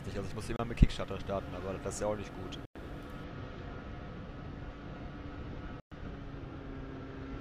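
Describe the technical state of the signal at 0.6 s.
Around 0.6 s a Bluetooth dropout ends: from 0.56 to 0.59 s the output goes silent for about 29 ms, which fits two lost packets, likely late wireless delivery. Unlike a stall, the sound resumes further along, as though it had kept playing.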